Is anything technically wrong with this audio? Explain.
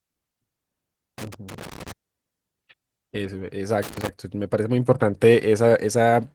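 Yes. Loose connector crackle breaks into the speech twice, from 1.18 to 1.92 s and again from 3.82 to 4.09 s. A worn or dirty contact is making and breaking as it shifts, chopping the signal on and off and adding pops wherever DC sits on the line. The result is an irregular scratchy burst. Its random, uneven spacing sets it apart from buffer-underrun clicks, which come with gaps where the audio stream runs dry, and from clipping, which tracks the loudest moments.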